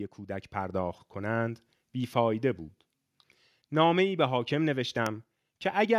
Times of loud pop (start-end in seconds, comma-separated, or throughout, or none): 5.06-5.08